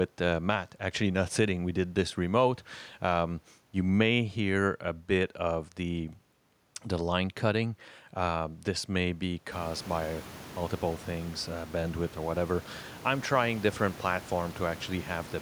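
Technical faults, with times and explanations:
Nothing stood out on listening to this speech, though the room's own background noise rises by about 18 dB from around 9.5 s and stays about 22 dB below the speaking level.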